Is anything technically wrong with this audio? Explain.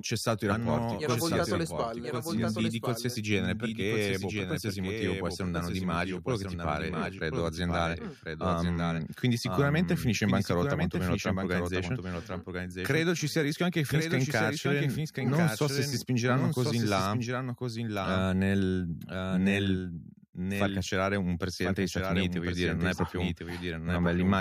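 Yes, there is a doubled audio track throughout. A second copy of the speech trails about a second behind, a few dB quieter, likely from a slower capture path. On a spectrogram, every pattern repeats a second later, fainter.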